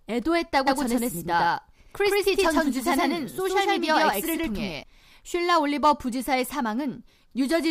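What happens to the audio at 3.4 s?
At 3.4 s you're in the middle of a doubled audio track running from 0.67 to 4.83 s: a second, equally loud full-band copy of the speech trails about a tenth of a second behind, with no decay or room colour. That's likely a slower second capture path.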